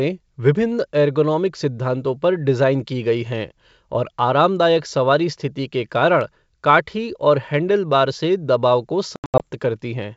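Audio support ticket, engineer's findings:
Packet loss on ADPCM call, 9.16–9.43 s: hard-edged silent gaps, about 180 ms missing across roughly 240 ms, longest hole 80 ms, consistent with around ten lost packets. Decoder's adaptive predictor and step size drift from the sender's during the holes, so the sound resumes slightly distorted until they resync. G.722 wideband path at 64 kbit/s, faint coding hiss at most.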